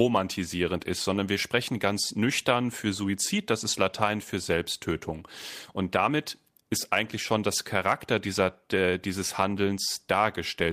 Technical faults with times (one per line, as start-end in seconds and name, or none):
none